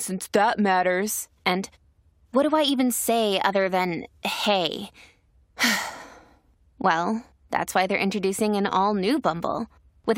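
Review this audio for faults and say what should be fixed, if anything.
Nothing needs fixing: the speech signal has no technical faults to be heard anywhere in the recording.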